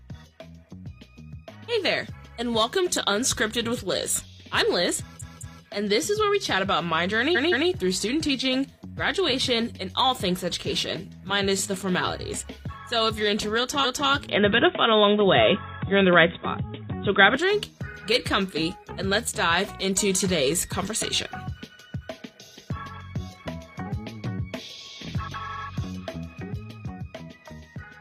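At 5.18 s a block of about 0.21 s plays twice more, and at 7.32 s a 0.17 s block does the same. At 13.80 s a 0.26 s block replays once. These are repeated frames, so each one stutters and stretches the clip slightly. From 14.29 to 17.37 s the sound abruptly turns dull and boxy, with nothing above 3.8 kHz, a level shift of a few dB and a faint new noise floor. That's likely an input switched to a poorer device, with no gap at either switch. At 25.45 s an 85 ms block plays twice more, giving a quick stutter.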